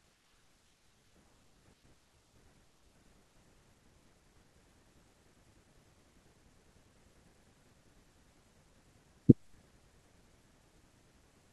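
Listening to the speech recording, nothing technical stood out.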